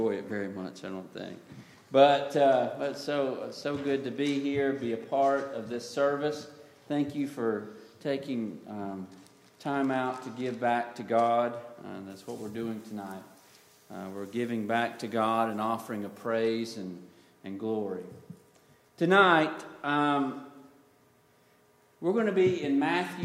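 From 12.1 to 16.26 s, pre-emphasis is left on. The treble boost of the CD 50/15 µs curve was applied, but the matching de-emphasis never was. At 10 kHz the level sits about 8 dB above 1 kHz. The sound turns thin, bright and hissy.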